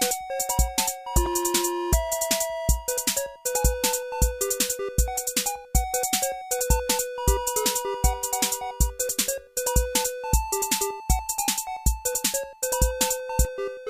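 No technical faults can be heard anywhere in this recording.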